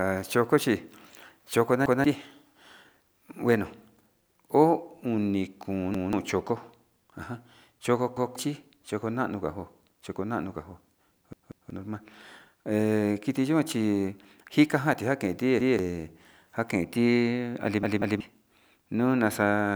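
Repeated buffer stutters occur at 1.86, 5.94 (just before "choko ajan choko"), 8.17 (right after "choko ajan choko", before "choko nano"), 11.33, 15.60 and 17.83 s. When fresh audio arrived late, the last block of about 186 ms, which fits an 8192-sample buffer, played again. That block sounds twice at most events and three times at 11.33 and 17.83 s, with roughly a fifth to two-fifths of a second of real audio lost. On a waveform and spectrogram, identical segments sit side by side with abrupt vertical seams at each join.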